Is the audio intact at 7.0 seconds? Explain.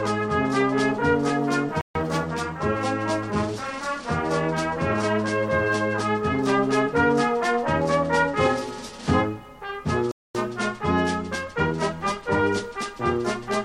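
Yes, the audio is intact at 7.0 seconds, with no dropout, click, distortion or other fault to be heard at that point.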